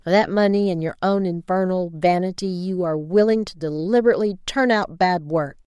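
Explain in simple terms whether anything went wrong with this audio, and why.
Nothing went wrong with this speech recording that a listener can pick out. At no point does anything in the sound suggest a technical problem, so there is nothing to explain.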